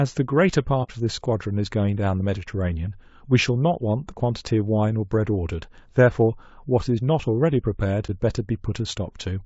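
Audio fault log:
throughout: low-delay AAC compression. The speech sounds plainly rough and grainy, with a hiss-like fill between the pitch harmonics and a top band that sounds thinned and somewhat synthetic. This is likely low-delay AAC of the kind used in video calls, at a low bitrate around 32 kbps. Its short frames cannot separate closely spaced harmonics well, so the coder smears noise between them and spends fewer bits on the highs, which leaves a coarse, slightly artificial upper range.
0.83–0.90 s and 8.06–8.10 s: AAC frame loss with muting. The sound drops out briefly twice, for about 60 ms the first time and about 30 ms the second. Each gap fades down and back up rather than cutting off sharply. The first gap fits two missing codec frames and the second fits one. The decoder silenced their spectra, and the overlapping frame windows turned each silence into a short fade out and back in.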